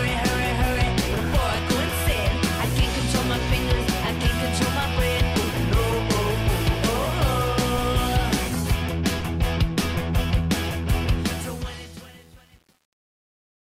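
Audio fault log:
11.20–13.75 s, truncation distortion on a fade: as the fade-out drops toward silence, the tail turns gritty and coarse, and from 11.58 s to the end it is at its coarsest. The stage producing the fade keeps too few bits and adds no dither, so the low-level waveform collapses into a handful of square steps. The coarseness fits an 8-bit stage.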